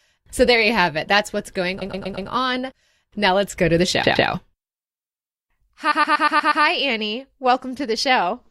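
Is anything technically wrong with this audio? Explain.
Yes. The speech has repeated frames at 1.81–2.29 s, 4.03–4.27 s and 5.91–6.63 s. A 120 ms block of compressed audio is decoded again, 4, 2 and 6 extra times, producing stutters and adding 1.44 s overall.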